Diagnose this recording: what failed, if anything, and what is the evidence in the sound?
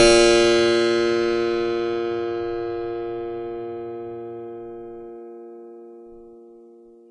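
Codec stage: the music has nothing above 10.4 kHz throughout, and the remaining treble sounds hissy and grainy, with roughened tones and smeared attacks. That's likely Vorbis compression at a low rate, around 30 kbps, quantising fine high-frequency detail into noise.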